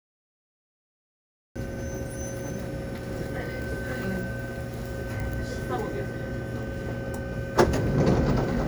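Digital silence runs from 0.0 s to 1.56 s, and then the audio appears abruptly mid-sound: a cut-off start, where capture began late. On the waveform there is flat silence before an abrupt onset with no attack, and on the spectrogram a hard vertical edge at 1.56 s.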